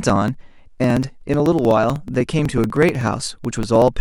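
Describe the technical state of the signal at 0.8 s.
At 0.8 s the speech is inside a run of periodic USB or driver dropouts lasting from 0.10 s to 3.94 s. A background task stalls the USB link or audio driver every 62 ms. Each stall skips a couple of milliseconds of audio, closing the gap rather than filling it with silence. About seventy such losses occur. They are heard as a steady ticking, roughly sixteen clicks per second, audible wherever the speech carries signal.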